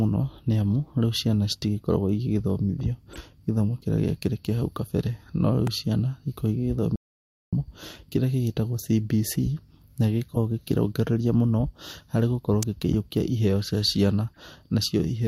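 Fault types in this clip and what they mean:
Compressed frames skipped: at 3.13 s and 10.34 s, just before "gĩkĩrongereria mũno harĩ gũkorwo", the speech jumps ahead a few to about 20 ms as missing or rejected frames go unplayed.
Electrical switching spike: sharp snaps at 5.67 s and 12.63 s, the second between "gĩkĩrongereria mũno harĩ gũkorwo" and "gĩkĩiũkia iheo cia ciana", likely a nearby switch arcing onto the line.
Audio dropout to silence: from 6.96 to 7.53 s the speech cuts to total silence for 0.57 s with no room tone, likely because the input was lost while silence was written.
Corrupt frame decoded: from 14.27 to 14.37 s, after "gĩkĩiũkia iheo cia ciana", several damaged frames decode with misplaced energy, giving a brief glitch.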